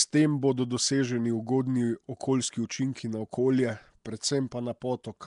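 From start to finish the speech carries a rough, hissy halo and a smeared, underwater quality, plainly audible and likely from Nellymoser compression. Weak bands are replaced with noise, showing as speckled fill on a spectrogram, with nothing above 10.7 kHz, which fits roughly 44 kbps.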